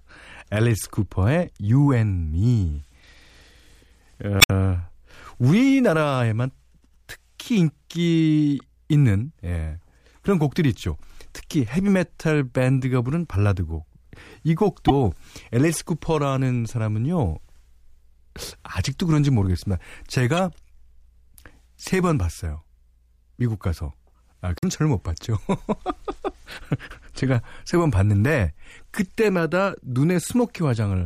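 Speech with five hits of damaged data in a compressed stream, at 4.38–4.51, 8.59, 14.88–14.91, 20.37 and 24.55–24.64 s. Corrupt bytes throw the decoder off its frames until it resyncs, so each spot comes out as a brief glitch.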